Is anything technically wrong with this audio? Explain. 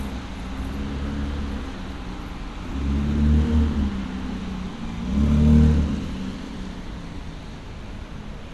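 No, nothing technically wrong turns up here; the audio comes through without any faults to point to.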